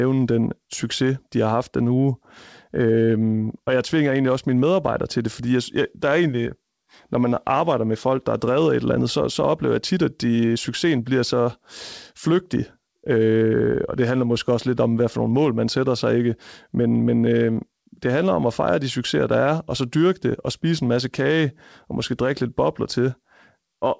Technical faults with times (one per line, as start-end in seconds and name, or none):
none